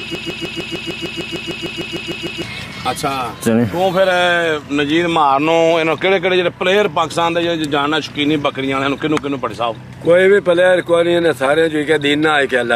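From the very start until about 2.43 s, the audio is stuck in a broken-record loop. A fragment of about 0.15 s repeats exactly, back to back, 15 times. The likely cause is a stalled player, encoder or stream resending its last fragment. The audio meant for that span is lost.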